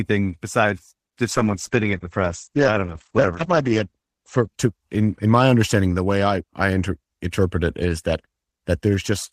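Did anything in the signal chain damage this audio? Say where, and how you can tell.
Yes. From 1.32 s to 5.35 s the speech turns rough and watery, and its top end is missing: everything above about 8 kHz drops away, against a full band reaching 20 kHz elsewhere. The worst stretch lasts about 2.5 s before quality returns. This is a call bitrate drop at the codec stage. The call's bandwidth estimate fell, so the encoder coded more coarsely and narrowed its band, which points to a fall from roughly 32 kbps to 12 kbps.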